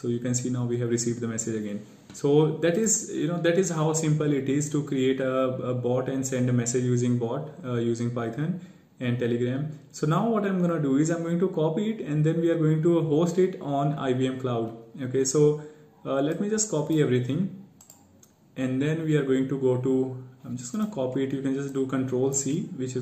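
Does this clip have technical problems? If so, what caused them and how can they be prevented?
No, this clip has no technical problems, so there is nothing to trace to a cause or prevent.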